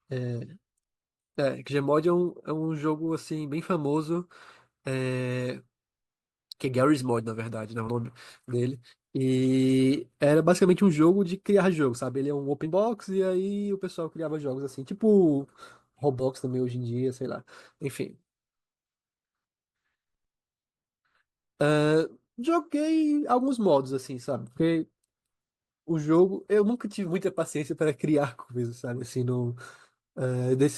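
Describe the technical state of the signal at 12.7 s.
At 12.65 to 12.68 s the speech jumps forward because compressed frames were skipped. About two frames, roughly 40 ms of audio, never reach the output, either missing from the stream or rejected by the decoder as damaged. The jump size fits a 20 ms frame length. No silent gap or hold is inserted at the join. That separates it from a dropout or a concealed loss.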